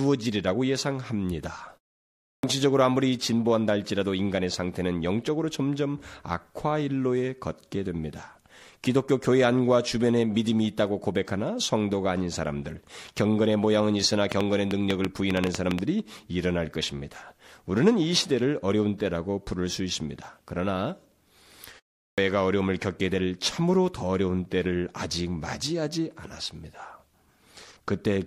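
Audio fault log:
2.31 s and 22.05 s, clipped start after a pause: After pauses of 0.6 s and 0.33 s, the output device had idled and needed time to wake, so about 124 ms and 128 ms of speech were lost. Each onset begins abruptly, without its first sounds.
14.32 to 15.80 s, train of clicks: Roughly ten similar clicks at about 7.5 per second, unevenly spaced and about 20 dB above the speech, tick over the sound. The likely cause is interference from nearby equipment or a faulty connection or power supply.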